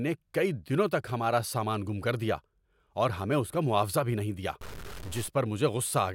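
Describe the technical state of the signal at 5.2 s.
At 5.2 s you're inside a stuck bit from 4.61 to 5.28 s, likely one data bit jammed, adding harsh buzzy distortion with noise around about -35 dBFS.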